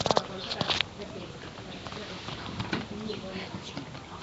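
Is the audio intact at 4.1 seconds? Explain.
No. At 4.1 s the speech carries Nellymoser compression damage that runs through the whole clip, likely from the Nellymoser Asao codec Flash once used for microphone input, at what sounds like about 32 kbps. That codec spends a fixed, small bit budget on short blocks, so quiet bands get no bits and are filled with synthetic noise. The result is a rough, hissy halo around the speech, a smeared, underwater quality, and nothing above 7.7 kHz.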